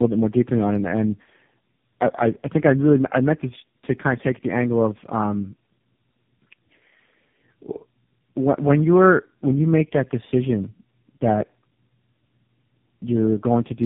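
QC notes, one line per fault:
throughout: tandem speech coding. The speech passes through three low-rate speech codecs in a row, GSM full rate, G.729A and finally AMR-NB at 6.7 kbit/s. Each one re-encodes the previous one's errors, so the result is rough, muffled and warbly, with nothing above 3.7 kHz.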